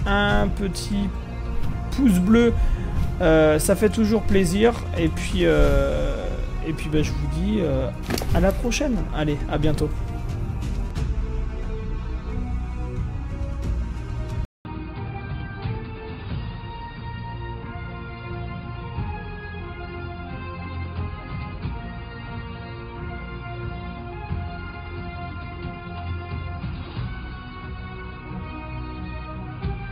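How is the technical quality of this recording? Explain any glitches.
The recording degrades partway through. At 14.45 s, after a 200 ms dropout, the sound turns dull and boxy: nothing above 4.8 kHz, new background noise about 35 dB down, level unchanged. This is likely an input switched to a poorer, narrower-band device, which remains in use to the end.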